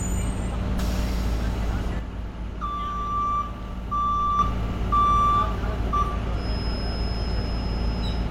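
One channel drops out from 1.99 s to 4.39 s. The sound falls abruptly by about 6 dB, holds at that lower level for 2.4 s, and then returns just as suddenly. The likely cause is one side of a stereo signal being lost while the two channels were summed to mono. Material shared by both channels is then carried by only one of them, so it comes through at half amplitude, and anything present only in the missing channel vanishes for the duration.

A feedback whistle begins at 6.31 s and lasts until the clip ends at 8.31 s. It is a thin, steady tone at 5.1 kHz sitting roughly 20 dB below the main signal, swelling and fading slowly in level without ever building up. This likely comes from a loudspeaker-to-microphone loop running right at the edge of feedback. That single high frequency keeps recirculating with just enough gain to sustain itself but not enough to run away into a howl.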